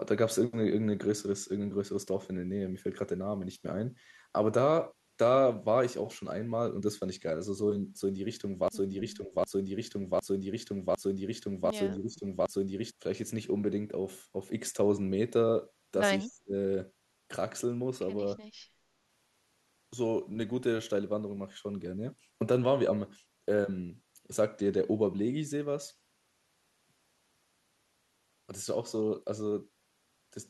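From 8.68 to 12.91 s you get a broken-record loop: a chunk of speech about 0.76 s long plays back to back, six times over, each pass identical. Most likely the player or stream stalled and just kept re-sending the last fragment it had buffered, so whatever should have played across those four-odd seconds is simply gone.

Then there are short dips where the talker gets pulled down, which points to speech suppressed in double talk. It happens at 9.18 to 9.35 s and 11.96 to 12.25 s, both shallow, around 10 dB, and again at 16.23 to 16.54 s, where it drops much harder, about 30 dB, nearly cutting out. The likely culprit is an echo canceller that couldn't tell this talker apart from loudspeaker echo while both sides were talking, so it ducked both.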